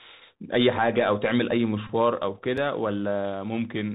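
A speech recording carried over a Bluetooth CVSD headset codec, with audible damage throughout. The link encodes the signal as a single up-or-down bit per sample with an adapting step size, which fits a 64 kbps headset stream. Everything above 4 kHz is gone, so the speech sounds narrow and telephone-like. A grainy hiss sits under the voice, s sounds come through scratchy, and sharp, loud high-frequency moments distort where the step size cannot keep up with the waveform.

From 1.87 to 1.89 s there is a Bluetooth headset packet repeat. Voice packets between headset and phone were lost, and the chip decoded the last received packet's bits again in their place. Over roughly 19 ms the repeat at a 3.75 ms interval produces a short buzz near 267 Hz, which points to about five consecutive packets missing before clean data resumes.

At 2.57 s a block of digital silence cuts in. A stretch of output was replaced with zeros, which fits a 128-sample block the playback path failed to fill in time or filled with invalid values. 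At 2.9 ms the hole is too brief to register as a pause. It is heard as a tick or dip, from the abrupt, unfaded drop to zero and the equally abrupt return.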